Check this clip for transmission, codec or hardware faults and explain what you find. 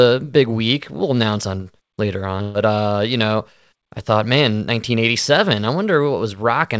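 One transmission fault is audible, a burst of packet loss in the speech from 2.42 to 2.57 s, between "announce on later" and "uh you know I". Several consecutive packets were lost or arrived too late to play. The receiver concealed the gap by extending the last audio for about 124 ms while fading it, so a held buzz or fading hiss stands in for the real signal. When playback resumes, about 120 ms of speech is missing. The call codec's band limit is present throughout, with nothing above 8 kHz, which fits G.722 at 64 kbps.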